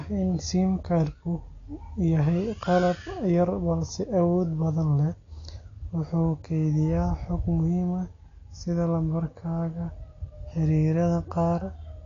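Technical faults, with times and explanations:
Throughout, AAC compression: the speech sounds dull and smeared, with nothing above 7.1 kHz, and sibilants and sustained vowels carry a plainly audible warbling, fizzy texture. This is likely AAC-LC coding at a low rate, which fits roughly 32 kbps. To save bits, the encoder drops the top of the spectrum and quantises the remaining bands coarsely against its hearing model, so detail thins out and frame-to-frame changes in those bands come through as swirling artefacts.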